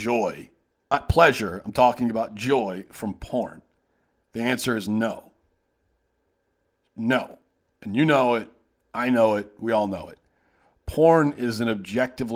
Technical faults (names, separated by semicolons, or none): skip ahead; jitter buffer speed-up; processor overload crackle